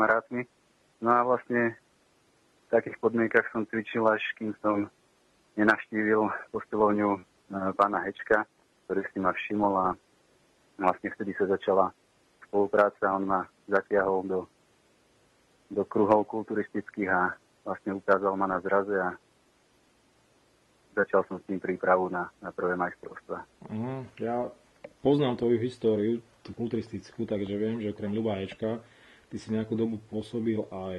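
Nothing here trips the ear as a fault at any point, so there's nothing to pin down along the way.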